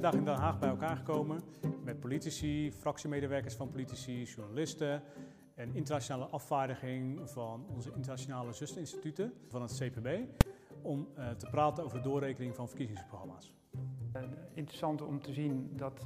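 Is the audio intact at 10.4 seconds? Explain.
No. At 10.41 s, invalid numbers at full scale occur. An infinite result pins the output at one extreme value for 2.9 ms, giving one loud bang.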